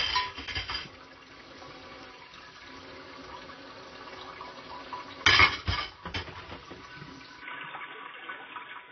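A recording of everyday sounds carries plainly audible codec damage throughout, most likely from AAC compression: nothing survives above 6.5 kHz, and the remaining spectrum sounds dull and smeared with a fizzy, warbling texture, which fits AAC-LC running at around 24 kbps. From 7.42 s to the end the input switched to a poorer device, likely a changeover to another microphone. There is no silence at the switch, but the band narrows abruptly to nothing above 3.6 kHz, giving a boxier tone. The level shifts by around 5 dB, and a new noise floor appears, sitting roughly 40 dB below the signal.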